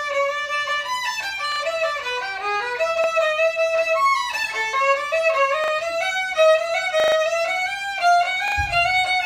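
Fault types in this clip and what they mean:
repeated buffer: at 1.52, 3.04, 5.64, 7.0 and 8.48 s, late data made the last chunk replay, giving hard-joined stutters fitting a 40 ms buffer.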